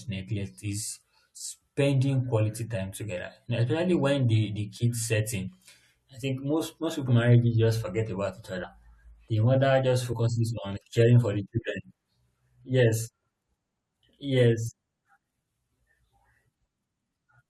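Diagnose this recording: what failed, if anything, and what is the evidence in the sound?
The speech lurches forward four times: at 5.47 s after "the the kids set", at 7.07 s between "I think most most" and "in marriages just forget", at 8.63 s after "just forget about each", and at 10.12 s. About 100, 70, 40 and 40 ms vanish. This is compressed frames skipped at the codec stage: a few whole 21.3 ms frames were missing or rejected by the decoder.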